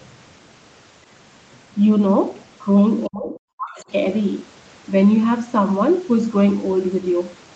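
From 3.07 to 3.84 s the speech sinks by roughly 40 dB and breaks up: speech suppressed in double talk, likely an echo canceller muting the talker while the far side spoke.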